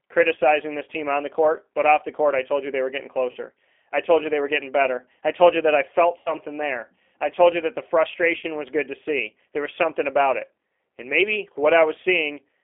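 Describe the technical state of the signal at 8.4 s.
Around 8.39 to 8.45 s, about 40 ms of audio never arrived, which fits two lost 20 ms packets. This is VoIP packet loss concealed by the speech codec: the decoder kept regenerating from its last pitch and vocal tract settings while turning the gain down frame by frame. The speech at that point smears into a short buzzy tone or coloured noise that fades, and because each frame builds on the one before, it sounds weak or distorted just after the gap.

Underneath this, the whole line runs through the G.729 codec at 8 kbit/s. That rebuilds speech from a filter, a pitch predictor and a few pulses per frame, passing only about 300 Hz to 3.5 kHz. The result is dull, telephone-band speech with a plainly audible rough, synthetic edge.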